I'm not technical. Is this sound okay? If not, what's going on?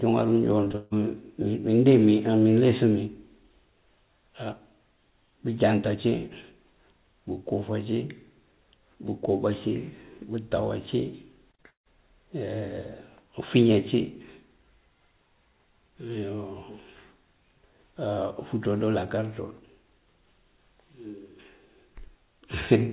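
No. There are two short bursts of repeated packet loss (robotic sound), at 0.64 to 0.94 s and 11.5 to 11.98 s. Bits of sound went missing, and the gaps were patched over, so it sounds choppy and robotic.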